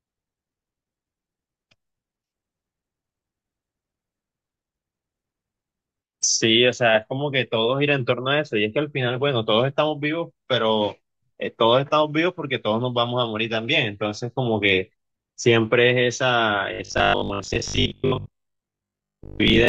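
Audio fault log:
16.74–19.68 s, robotic sound from repeated short buffers: the speech becomes a rigid metallic buzz fixed at 50 Hz, which fits a repeated 20 ms buffer, likely from audio arriving too seldom. Unlike a stutter, the repeats are heard as pitch rather than echoes.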